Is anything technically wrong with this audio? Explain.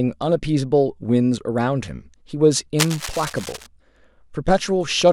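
Yes. Cable scratch noise runs from 2.79 to 3.67 s, a burst of dense, uneven crackle lying about 10 dB below the speech. The likely cause is a worn cable, connector or control being moved, so that its contact resistance flickers rapidly and injects irregular noise into the signal path. For just under a second it sounds like scratching or rustling laid over the speech.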